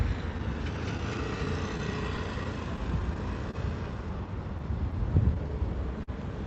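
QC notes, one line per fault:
Throughout: clock drift between sender and receiver. The sending clock runs slow by roughly 3 percent, so audio arrives a little behind the rate it is played out and the jitter buffer keeps drifting toward empty. The receiver keeps compensating by stretching or repeating short stretches of sound. The result is small, unevenly spaced timing hiccups across the whole clip rather than one distinct event, heard as slight wobbles in the flow of the audio.
0.38 to 3.55 s: scattered short gaps. About ten isolated packets went missing or arrived too late over this span. Each hole was patched by extending the preceding sound, so nothing audible drops out, but each repair leaves a brief tick, smear or hiccup. The longest repair is about 30 ms, and together they fill on the order of 100 ms, roughly 3 percent of the span. The Opus call path's 8 kHz cutoff dulls the top end.
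6.03 to 6.10 s: short stall from a late packet. A packet was not in the jitter buffer when due, so the buffer ran dry and the receiver held the last sound for 42 ms until the packet turned up. Playback then resumed from where it left off, with nothing skipped. The sound is held slightly too long, with a faint buzz or dip, and everything after it plays 42 ms later than before.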